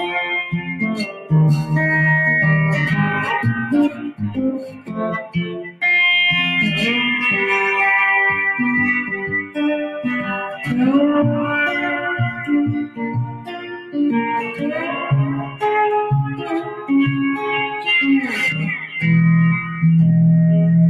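Throughout, a noise suppressor applied to these sounds treats steady content as noise, so the level pumps by around 10 dB. A compressor would react to loudness, but this one lets onsets mostly through. Sound cut by the noise suppressor occurs at 0.44–1.31, 3.89–5.82, 9.12–9.57, 10.21–10.68, 12.32–12.47, 12.83–13.97, 14.44–15.62 and 16.25–16.91 s. In these spans held parts sink by up to about 17 dB and decays end early, whereas a dropout would silence the attacks too.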